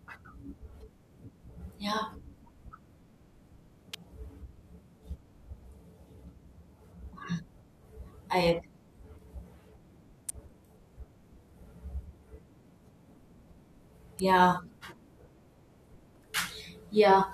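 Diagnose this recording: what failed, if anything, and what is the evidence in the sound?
Electrical switching spike at 3.94, 10.29 and 14.19 s: sharp snaps over the speech, likely a nearby switch arcing into the analogue wiring.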